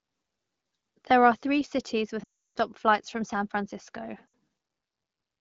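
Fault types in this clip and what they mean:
Lost AMR speech frames: radio errors corrupted chunks of the coded speech, so the decoder kept replaying its last good pitch and vocal tract settings while pulling the gain down. At 2.23 s there's a gap of about 0.35 s, which fits a run of sixteen 20 ms frames. The sound smears briefly, then drops to silence fast, as wideband does. At 4.28 s a 60 ms loss of three frames fades quickly to near silence. The AMR-WB coding at 12.65 kbit/s around them sounds clear.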